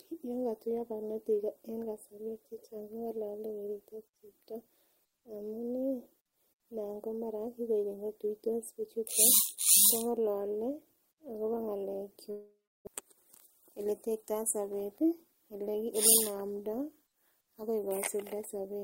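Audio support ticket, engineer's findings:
Long network dropout, 12.31–12.89 s. Last sound smeared into a fading buzz, then 320 ms of silence; about 400 ms of speech never returns. Likely receiver-side packet loss, with concealment filling 555 ms before playback resumes further on.

Jitter buffer speed-up, 13.0–14.31 s. Speech hurried, 109% speed, pitch unchanged. Jitter buffer trimming repeated pitch-period-sized slices to shed roughly 150 ms of excess delay left after the dropout, pulling latency back toward target.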